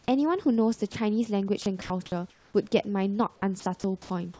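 At 0.92 s the speech briefly gives way to steady hiss for about 20 ms before it resumes. This is sound dropped by the voice detector: the sender likely judged that instant to be background and stopped transmitting, so the receiver filled the gap with comfort noise.

From 1.62 s to 2.54 s the speech turns choppy. Fragments totalling about 420 ms are swapped for synthetic hiss. The same happens from 3.60 s to the end, where about 241 ms is replaced. Both stretches are sound chopped by the voice detector, with the sender likely toggling repeatedly between sending and not sending, and comfort noise filling each pause. Throughout, the call codec leaves nothing above 8 kHz, which fits G.722.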